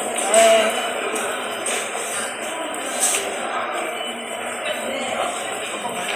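No technical faults can be heard anywhere in this recording of sounds. Nothing in the audio points to a problem in how it was captured, processed or passed along.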